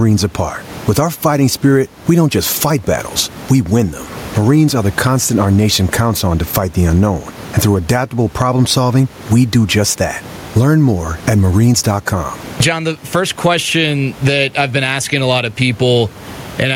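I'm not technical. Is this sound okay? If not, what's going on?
No. From start to finish the speech has gain pumping: the level is pulled down each time someone speaks, then comes back up between phrases, a large, breathing swing. Steady room noise stays level, but this rises and falls with the speech, likely from the microphone level being set far too high so an automatic limiter keeps clamping down.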